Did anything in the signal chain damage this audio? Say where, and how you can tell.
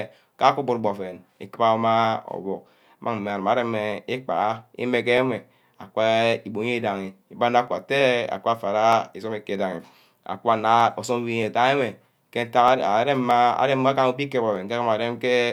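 Yes. There's a steady tick running under the speech from about 0.17 s to 15.19 s, landing every 0.63 s or so, roughly 30 of them. That regularity points to the driver or buffer stage, most likely clock drift buffer slips: two devices on separate clocks disagreeing by something like 500 ppm, so the buffer between them creeps until a small block, around 15 samples, gets dropped or doubled, and each slip clicks.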